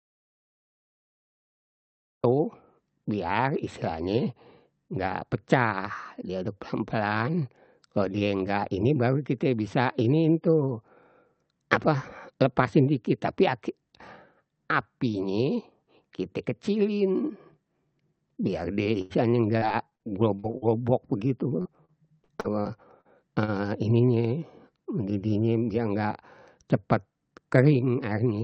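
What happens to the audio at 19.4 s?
At 19.4 s the speech is inside a stretch of repeated packet loss, giving a robotic sound. The stretch runs from 18.83 to 20.02 s. Seven short holes open in the audio, the longest 86 ms. Each one is patched by stretching the last sound, and about a fifth of the span ends up filled this way. The result is choppy, with pieces clipped out. It plays over call-codec audio already limited to about 8 kHz.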